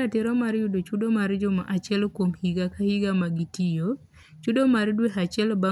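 No technical faults are audible.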